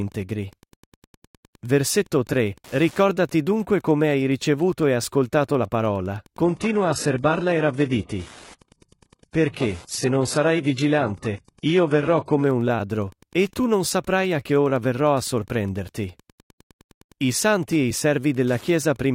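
A speech clip with two faults. Wi-Fi interference ticks steadily throughout, once every 102.4 ms. It sits faint, roughly 30 dB under the speech, as a nearby radio's beacon gets rectified by the audio circuit. From 6.44 to 12.44 s the adaptive stream drops to a lower bitrate. The treble is cut above 11.5 kHz, which points to a very low-bitrate HE-AAC version, and the quality switches abruptly without any gap.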